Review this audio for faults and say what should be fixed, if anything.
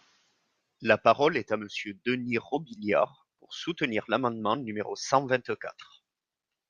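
Nothing in the recording needs to be fixed, as no faults can be heard.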